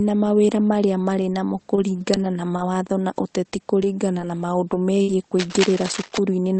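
A short stall from a late packet comes at 1.75 to 1.80 s, just after "mawĩra marĩa marĩ namo". The packet arrived late, the jitter buffer ran dry, and the receiver held the last sound for about 15 ms before carrying on from the same point. It is heard as a briefly stretched sound with a slight buzz or dip, and nothing is lost.

Lost packets rebuilt from error correction recur from 1.77 s to 5.56 s, twelve times in all. Most repairs last 60 ms, and they cluster around 1.8 to 2.2 s, then spread out at roughly 0.3 to 0.6 s intervals. Each missing packet was replaced by the low-bitrate copy carried in the next one, so there is no gap, but those stretches sound rougher and noisier.

A burst of packet loss follows at 5.02 to 5.11 s. About 60 ms of audio never arrived in time. The receiver extended and faded the preceding sound across the gap, giving a dying buzz or hiss, and then resumed further on with that section gone.

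Cable scratch noise runs from 5.39 to 6.18 s, at about 10 dB below the signal. Dense, irregular crackling and rustling sits over the sound, likely from a worn cable or connector being moved so that its contact resistance jumps around.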